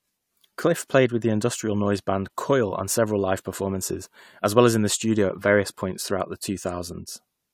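Nothing in the recording points to a technical fault at any point: the speech signal stays continuous and intact throughout.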